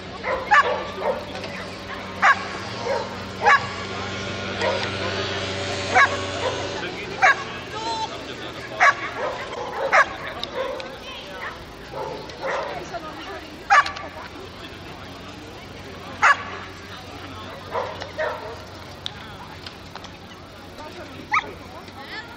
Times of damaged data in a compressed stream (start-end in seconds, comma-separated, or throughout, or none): 9.52-9.57, 20.75-20.80